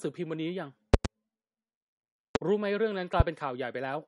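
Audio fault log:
throughout, MP3 compression: the speech sounds watery and swirly, with nothing above 11.1 kHz and plainly audible smearing. This is likely a low-bitrate MP3 encoding, fitting about 48 kbps, that cut the treble and dropped weak frequency lines frame by frame.
0.94–1.08 s, 2.35–2.38 s, 3.20–3.23 s, loud pop: sharp pops stand roughly 20 to 25 dB above the speech, which continues underneath. The first event is a double pop. Each is likely a sudden voltage step or pulse, such as static or a switch, added to the signal.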